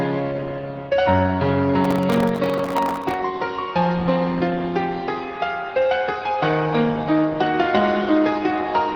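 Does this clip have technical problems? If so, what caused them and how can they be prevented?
Yes. From 1.85 to 3.14 s there is processor overload crackle: a gritty tearing riding on the sound. The processor repeatedly failed to finish its very short buffers on time, around 1.5 ms each, and on each miss a scrap of old audio was replayed with hard edges. Dozens of these misses packed close together make a crackle, not the single clean gap of one dropout, and it stops once the load eases. To prevent it, use a larger buffer or reduce the processing load on the machine during recording.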